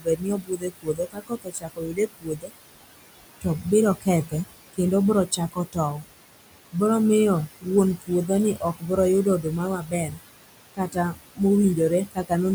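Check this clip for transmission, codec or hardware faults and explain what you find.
The speech in this clip has two related faults, both from the noise suppressor rather than from transmission, codec or hardware.

Noise suppressor artifacts run throughout. The suppressor pulls down whatever bands it judges to be steady noise, by about 20 dB. The room noise, sitting about 12 dB under the speech, sinks in the gaps and swells under the voice.

Speech cut by the noise suppressor occurs at 0.00–2.51 s, 3.41–6.04 s, 7.61–10.22 s, 10.75–11.40 s and 12.06–12.31 s, with drops of about 17 to 22 dB. The suppressor mistook quieter speech for noise, so endings and soft consonants sound swallowed, most heavily across the first two seconds.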